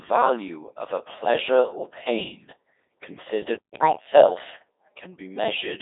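Throughout, the Codec 2 vocoder rebuilds the speech from sine waves, so it sounds robotic and buzzy rather than merely muffled. The band runs from 300 Hz to 3.7 kHz, with nothing above 3.8 kHz, which fits a 2.4 kbit/s mode.

From 3.74 to 4.07 s, catch-up at higher speed plays the backlog 1.5 times faster. Pitch and tempo rise together by about a fifth, then return to normal, unlike a steady pitch shift.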